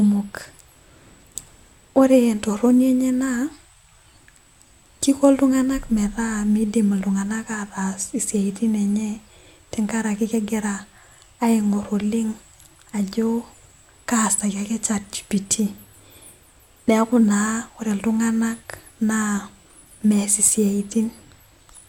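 Listening through this speech recording, nothing stood out as a technical problem at any point.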